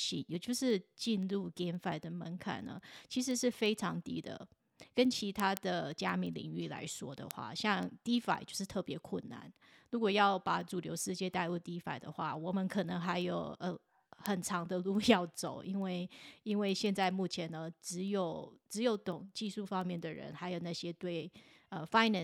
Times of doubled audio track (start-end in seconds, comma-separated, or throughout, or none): none